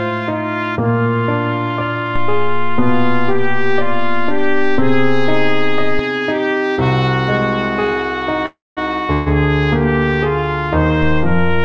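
DC step at 2.16 s: the waveform's zero line jumps to an offset, giving a low thump as it shifts, and lasts until 5.99 s. A further DC step at 11.03 s shifts the baseline again and stays there to the end. In both cases the sound rides unchanged on the shifted baseline, and the thumps come only from the sudden change in the zero level. Call audio freeze at 8.46 to 8.79 s: the audio halts and the last sound is stretched into a fading buzz that falls into about 200 ms of silence, filling 307 ms in all. A second freeze at 9.13 to 9.28 s fills 136 ms with a decaying continuation and no silent stretch. Nothing is lost in either freeze. The audio resumes exactly where it stopped, so everything after it arrives later by the length of the fill. The likely cause is packets held up in transit, letting the jitter buffer run empty until they arrived. The signal has passed through a call path with nothing above 8 kHz, which fits a wideband codec such as G.722.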